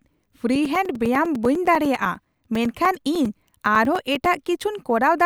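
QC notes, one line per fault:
0.55–4.26 s: periodic USB or driver dropouts. A brief gap of a few milliseconds is replaced by silence every 0.1 s, about forty in all, so the speech carries a steady 10 Hz ticking. This is typical of a background task repeatedly stalling the audio path.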